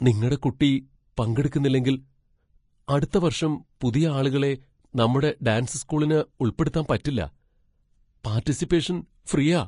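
From start to end, the speech is hissy and grainy. Nothing is left above 10.6 kHz. The cause is likely Vorbis compression at a low bitrate, around 30 kbps. Coarse quantising turns treble detail into noise, roughening tones and blurring consonant attacks.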